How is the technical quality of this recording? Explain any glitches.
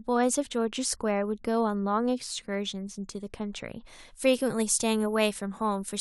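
The recording has one fault, in the speech's final stretch. From 3.85 s to the end, pre-emphasis is left on: the 50 µs FM-style treble boost was never undone, leaving highs about 11 dB above 1 kHz at 10 kHz, so speech turns thin, bright and hissy-sibilant.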